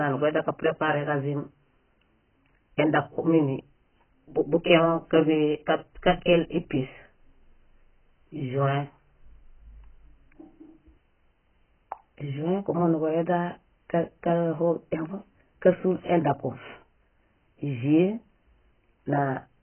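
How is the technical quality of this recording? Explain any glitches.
The quality is poor throughout, with heavy AAC compression damage. From start to finish the speech sounds dull and smeared, with nothing above about 3.1 kHz and a warbling, fizzy texture on sustained sounds and sibilants. The likely cause is AAC-LC encoding at a very low bitrate, pointing to around 12 kbps. The encoder pulled its cut-off down and quantised the remaining bands so coarsely that spectral holes and substitute noise replace real detail.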